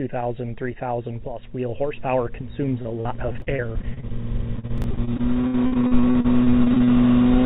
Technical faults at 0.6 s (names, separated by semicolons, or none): none